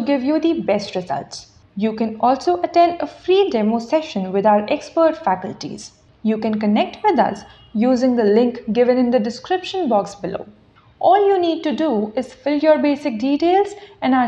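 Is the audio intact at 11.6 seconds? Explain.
Yes, the audio is intact at 11.6 seconds, with no dropout, click, distortion or other fault at that moment.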